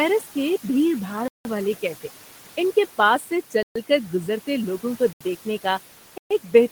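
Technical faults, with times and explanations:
throughout: noise suppressor artifacts. The room noise, sitting about 18 dB below the speech, is pulled down by about 11 dB in the pauses and comes back up under the speech, so the background pumps in step with it. The suppressor decides band by band and frame by frame what counts as steady noise. On a spectrogram the noise floor looks patchy and speckled, darker between phrases than beneath them.
1.28–1.45 s, 3.63–3.76 s, 5.13–5.21 s, 6.18–6.31 s: block of digital silence. The output drops to silence for about 171, 128, 77 and 128 ms, then resumes with no fade. The first gap fits an 8192-sample block at 48 kHz, which points to the output buffer not being filled in time. The second ends just before "کر گزرتے لوگوں کو". The third falls between "کر گزرتے لوگوں کو" and "دیکھنے کا". The last comes just after "لوگوں کو دیکھنے کا". On the waveform each gap is a flat line with sharp steps at the edges. 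On the spectrogram each is a dark vertical band.
3.19–3.31 s: speech cut by the noise suppressor. For about a tenth of a second the suppressor treats part of the speech as noise and lowers it by up to about 9 dB along with the background, so that stretch sounds swallowed and faint. On the spectrogram the speech energy there fades toward the darkened noise floor. On the waveform it appears as a brief dip in the envelope.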